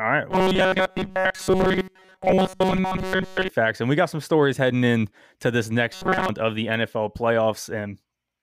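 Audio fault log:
0.31–3.49 s and 5.93–6.29 s, robotic sound from repeated short buffers: the speech becomes a stiff metallic buzz locked at 188 Hz, first near the start and then again right after "heading in to this", clearing by "of the". Audio was likely arriving too slowly, so a slice of about 5.3 ms was replayed over and over while most of the real audio was skipped. That fixed repetition rate sets the buzz pitch.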